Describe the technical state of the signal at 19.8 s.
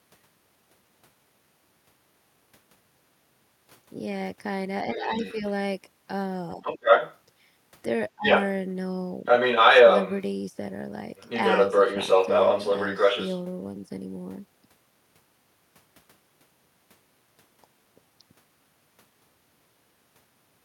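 At 19.8 s the speech signal is intact, with no audible technical fault at that moment.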